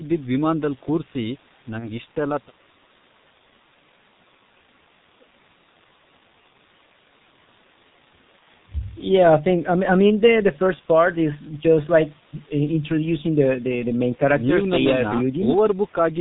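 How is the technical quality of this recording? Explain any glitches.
Technical quality is poor, limited by heavy low-bitrate coding throughout and two brief dropouts.

G.723.1 codec, throughout: the encoder models speech in 30 ms frames at a very low rate, consistent with about 6.3 kbit/s, and discards everything above 4 kHz. The speech sounds muffled and hoarse, with smeared consonants, because nothing above 4 kHz survives and the voice model updates so slowly.

VoIP packet loss concealed by the speech codec, at 1.79–1.91 s and 8.39–8.44 s: each gap fits a single lost 30 ms frame. The decoder repeated its last pitch and filter at falling gain, so the speech is briefly stretched into a fading buzz or coloured noise and stays weak, then recovers over the following frames.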